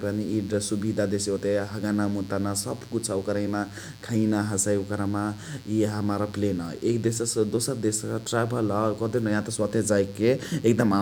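Sharp switching spikes, from a source such as a dimmer, rectifier or unshielded cable, leak into the signal path twice in every cycle of a 60 Hz mains supply, spreading harmonics up to several kilohertz. Throughout, a steady, raspy mains buzz sits roughly 25 dB below the speech.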